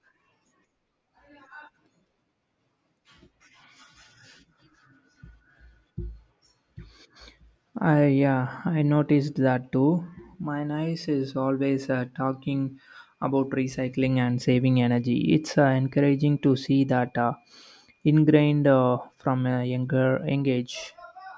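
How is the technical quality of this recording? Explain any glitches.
The technical quality of this recording holds up, with no glitches to explain.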